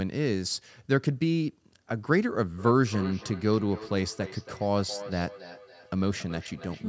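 From 2.58 s to the end, the speech repeats roughly every third of a second, about 15 dB down: feedback echo between two devices.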